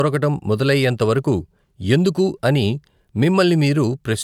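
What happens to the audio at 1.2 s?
Nothing goes wrong at 1.2 s; the speech runs on intact through that moment.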